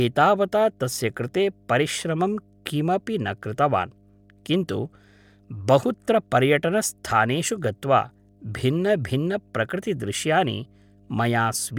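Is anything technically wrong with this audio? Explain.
Yes, there is mains hum under the speech throughout: a ground loop or nearby transformer leaks 50 Hz into the signal, a steady pitched tone about 35 dB down, unlike broadband rumble.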